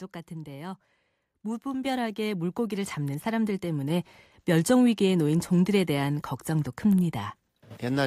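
At 1.86 s the microphone volume steps up by about 6 dB. At 2.88 s it steps up again by about 4 dB, and at 3.9 s by about 3 dB. The call software raised the input volume in single jumps, so speech and background rise together abruptly.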